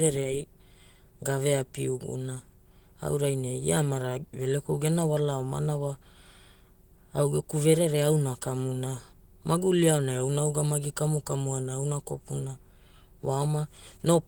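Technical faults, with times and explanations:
Nothing here counts as a technical fault; the speech comes through Opus voice compression in its light, fullband hybrid form.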